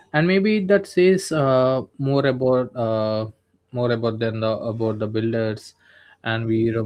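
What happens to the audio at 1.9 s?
Nothing goes wrong at 1.9 s; the speech carries on intact through that moment, with no dropout, click or distortion to be heard.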